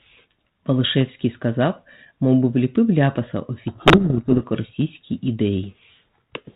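From 3.68 to 4.45 s the speech is buried in harsh, grinding distortion: a codec payload misread. The receiving decoder unpacks the G.726 code words with their bit order reversed, so each sample's difference value is taken from the wrong bits and the adaptive predictor is driven off course. Clean decoding returns once the packing agrees again, leaving the light band-limited texture of 32 kbit/s G.726 beneath.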